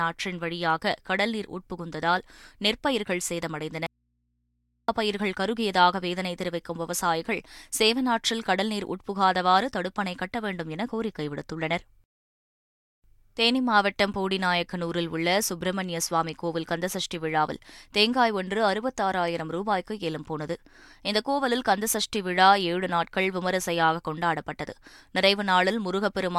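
At 3.86 s the speech drops out abruptly and doesn't come back until 4.88 s, so roughly a second is simply gone. It's an audio dropout to a faint residue: the gap isn't silent but holds a low mains hum, somewhere around 50 dB below the speech. That the hum carries on through the gap likely means the connection broke upstream while the input stayed open. The cut is hard on both ends, nothing like a natural pause or fade.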